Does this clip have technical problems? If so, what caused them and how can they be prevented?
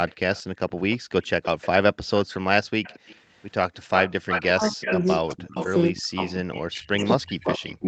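Yes. An echo leak puts a delayed copy of the speech into the audio from 0.08 to 2.2 s and 2.83 to 3.42 s, at 229 ms and about 20 to 25 dB down. It returns at 346 ms from 3.96 to 5.67 s, 6.26 s and 7.09 to 7.75 s, nearly as loud as the speech except at 6.26 s, where it is about 20 dB down. The likely cause is a loudspeaker-side echo canceller that failed to remove everything its microphone picked up. Using a headset, lowering loudspeaker volume or improving echo-canceller convergence prevents this.

Background gated by the echo canceller drops the room sound by about 40 dB between 0.99 and 1.11 s, roughly a tenth of a second, as the canceller clamped the microphone during playback. Gentler suppression with comfort noise would prevent the gap.

Speech suppressed in double talk makes the speech dip by up to about 40 dB from 4.47 s to the end. The likely cause is that the canceller could not separate local speech from echo. 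Better double-talk detection or a headset prevents it.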